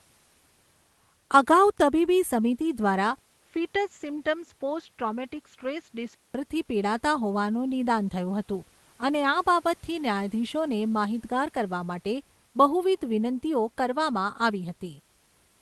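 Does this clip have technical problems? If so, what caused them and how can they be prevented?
Yes. From 3.18 to 6.35 s, between "અગાઉ તબીબી સમિતિ દ્વારા" and "પિડાતા હોવાનું નિદાન થયું", the speech turns duller and roughly 5 dB quieter. That pattern is most likely an input switched to a poorer device. A 200 ms silence marks the switch. On a spectrogram, the energy stops sharply at 7.6 kHz, well below the 12 kHz the Opus call path carries elsewhere. The waveform shows a brief flat gap and smaller peaks, and the new background noise sits far below the speech. To prevent this, lock the recording to one chosen microphone and disable automatic device or headset-profile switching during capture.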